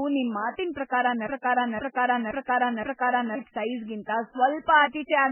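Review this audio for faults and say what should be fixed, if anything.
The low-bitrate audio saved at a high bitrate runs through the whole speech clip: its smeared, watery coding artefacts fit an 8 kbit/s MP3 that was likely re-saved at 256 kbit/s, which cannot restore the lost detail. On a spectrogram the sparse, blocky texture of the first encoding persists from start to finish. Keep the original source, or re-encode only from lossless material.

A broken-record loop runs from 1.27 to 3.35 s. A 0.52 s fragment repeats exactly four times, back to back, and the speech that belonged in that span is lost. The likely cause is a stalled player, encoder or stream. The waveform shows four identical blocks, and the spectrogram shows the same pattern stamped out in a row. Fix the stall with buffering and underrun detection, then recapture the missing section.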